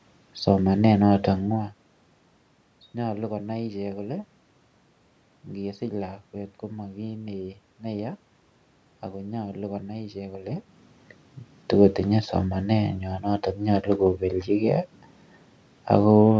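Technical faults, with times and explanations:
No technical faults detected.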